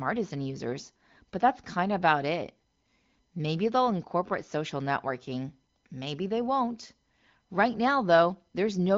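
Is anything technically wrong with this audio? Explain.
No, nothing in this speech stood out as a technical problem on listening.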